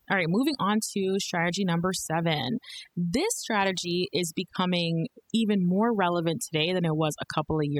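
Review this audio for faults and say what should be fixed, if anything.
From start to finish, the pauses drop to near silence scattered with twinkling, chirpy specks. That is overdone noise removal running through the whole clip. The noise reduction was set too aggressively, so any frequency band that came close to its noise estimate was pushed down hard or shut off entirely. The quiet, low-level parts of the voice sat near that threshold and were stripped out along with the noise, while isolated bands flickering on and off in the gaps produce the sparkle. To prevent it, apply gentler reduction with a lower strength setting and a more accurate noise profile, or record with less background noise in the first place.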